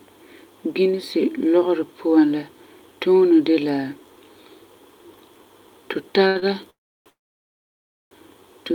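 At 6.27 s a short stall from a late packet begins. The buffer ran dry, and the receiver held the last sound for about 79 ms before resuming. A second stall at 6.39 s adds about 22 ms. The speech drags briefly with a slight buzz or dip.

A call audio freeze follows from 6.70 to 7.09 s. The sound fades into about 320 ms of silence, then resumes where it stopped. A longer freeze runs from 7.10 to 8.14 s, with nearly a second of silence. Packets were likely held up in transit each time.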